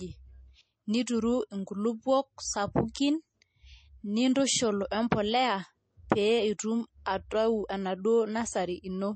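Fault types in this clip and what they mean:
MP3 compression: The speech has nothing above 8.4 kHz and carries plainly audible codec damage throughout, which fits a low bitrate around 32 kbps. The likely cause is an MP3 encoder short of bits, cutting the treble at a fixed point and dropping weaker frequency lines that come and go between frames. Unlike a simple low-pass filter, which only dulls the top end, this damage also shifts unsteadily over time.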